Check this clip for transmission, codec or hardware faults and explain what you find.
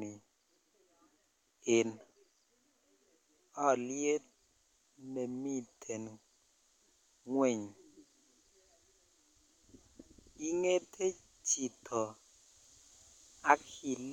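Nothing in the speech points to any transmission, codec or hardware fault, so the signal is technically sound throughout.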